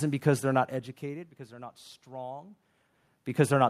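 No technical faults are audible.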